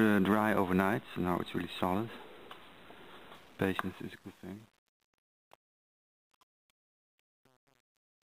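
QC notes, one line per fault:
3.34–8.35 s, truncation distortion on a fade: the fade-out turns gritty from 3.79 s as undithered quiet levels collapse into coarse steps, which fits 9-bit depth.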